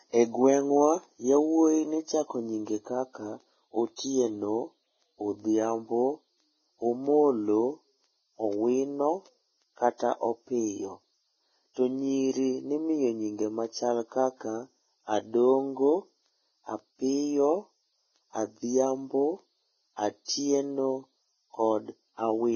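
A speech recording with heavy codec damage throughout. Nothing is heard above 6.5 kHz. The treble is hissy and grainy, and attacks are blurred. This is likely Vorbis compression at a bitrate around 15 kbps. Fine detail has become noise. Pre-echo occurs from 20.25 to 20.28 s. A short hiss of about 31 ms comes just before a sharp onset, which sounds smeared. The codec spread its quantisation noise across the whole block, into the quiet gap before the attack.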